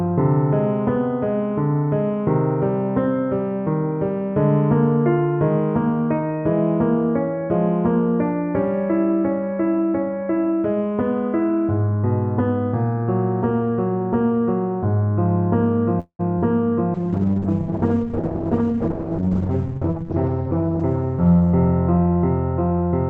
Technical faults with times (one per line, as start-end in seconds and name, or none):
15.99-16.21 call audio freeze
16.39-16.44 short concealed packet loss
16.96-23.09 call bitrate drop
18.61-20.03 jitter buffer speed-up